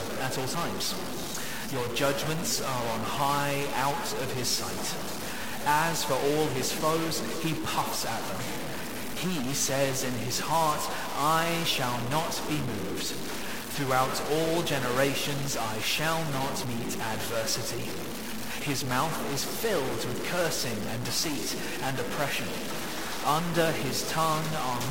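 All the way through, the sound carries a harsh, buzzy distortion, and the gaps fill with a gritty noise floor instead of going quiet. That points to a stuck bit, likely one converter line pinned high or low, knocking roughly half the samples off by a step of about -30 dBFS.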